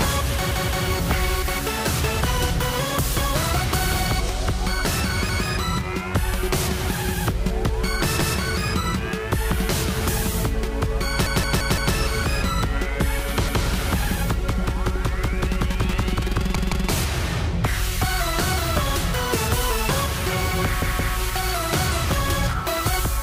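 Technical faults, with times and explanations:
0.51–0.85 s, 5.29–5.46 s, 8.19–8.36 s, 11.26–11.95 s, 13.48–13.65 s, 16.56–16.90 s, 20.82–21.16 s: repeated buffer. New audio arrived late, so the player looped its last block. Each 171 ms piece replays one to four times, with a hard join at each repeat. The stutter's length fits an 8192-sample buffer. Nothing audible seems to go missing.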